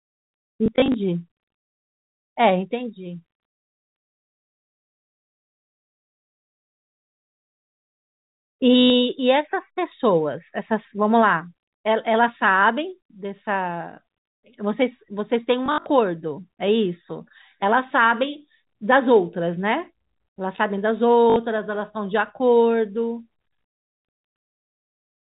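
Packet loss with the last packet repeated occurs at 0.66 to 0.94 s, 8.8 to 8.9 s, 15.66 to 15.86 s and 21.3 to 21.36 s. Each gap is filled by replaying the previous packet, which produces small blips in the first, scattered event and brief buzzing robotic stutters in the others, fitting 20 ms packets. These sit within the band-limited telephone sound of the G.711 coding.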